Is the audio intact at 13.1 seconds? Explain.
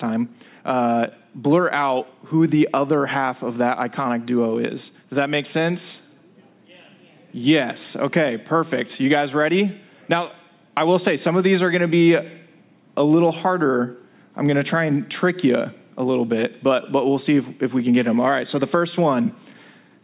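Yes, the audio at 13.1 seconds is intact, with no dropout, click, distortion or other audible fault at that point.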